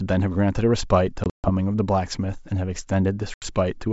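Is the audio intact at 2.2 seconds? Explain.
Yes, the speech is intact at 2.2 seconds, carried cleanly through G.722 wideband telephone coding at 64 kbit/s with at most a faint trace of that coding.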